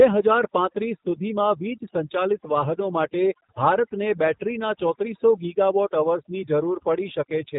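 Speech, with two faults present from start to end. The first is overdone noise removal. The noise reduction was set far too strong. Bands near its noise estimate are pulled down or dropped entirely, taking quiet parts of the voice with them. Pauses fall to near silence with twinkling specks. The second is G.729 codec damage, plainly audible. Nothing above about 3.8 kHz survives, so the sound is dull and narrow. The rough, slightly synthetic texture fits an 8 kbit/s G.729A encoder rebuilding each frame from a filter, a pitch predictor and a few pulses.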